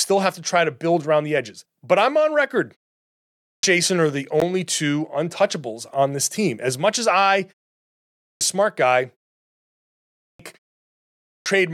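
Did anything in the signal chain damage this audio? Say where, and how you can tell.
Yes. At the playback stage, the output device powers down during short gaps and has to wake and re-lock before it passes sound again. Speech resumes abruptly, missing roughly half a second of its onset, after pauses of 0.36 to 0.73 s, at 3.11, 7.81, 9.81 and 10.89 s. This is a clipped start after a pause, with 0.52 to 0.60 s lost each time.

On the wireless link, a brief hole at 4.40 s, about 14 ms long, is likely a Bluetooth dropout: a packet reached the headphones too late and was discarded. The gap is consistent with a single lost frame, and speech continues afterwards as though it had kept playing.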